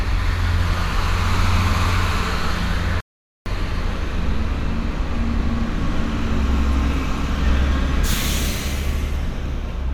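At 3.01 s the sound cuts off abruptly in mid-flow and stays silent until 3.46 s, a gap of about 455 ms, before carrying on. This is a playback stall: the player most likely ran out of buffered data or had its output thread blocked, so nothing reached the output until it recovered. On a waveform it appears as a flat line between sharp edges; on a spectrogram, as a clean vertical band of empty space across all frequencies.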